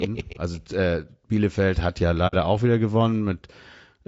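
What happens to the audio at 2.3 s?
Between 2.27 and 2.35 s, right after "hat ja" and before "auch wieder", the audio drops out in an AAC frame loss with muting. Roughly 60 ms of coded audio is missing, which fits two lost frames. The decoder replaced their spectrum with silence, and the overlapping transform windows fade the sound down into the gap and back up out of it. The result is a brief, soft-edged hole in the speech rather than a hard cut.

The same stretch also carries the roughness that runs through the whole clip: a grainy, buzzy texture with noise filling the spaces between voice harmonics and a thin, artificial-sounding top band. This is likely low-delay AAC compression, AAC-ELD, whose short frames resolve pitch harmonics poorly. The plainly audible damage points to a low bitrate, around 32 kbps.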